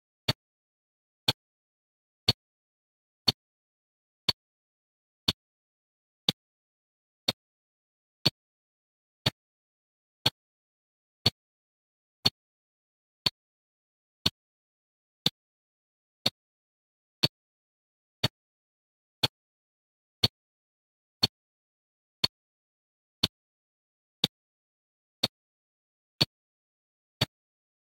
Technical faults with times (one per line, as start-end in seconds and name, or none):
none